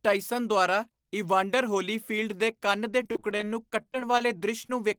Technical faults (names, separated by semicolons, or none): repeated packet loss (robotic sound)